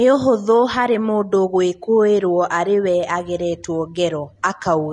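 From start to finish the speech sounds hissy and grainy, with roughened tones, softened consonant attacks, and nothing above 10.6 kHz. The likely cause is Vorbis compression at a low setting, around 31 kbps, where coarsely quantised treble turns fine detail into noise.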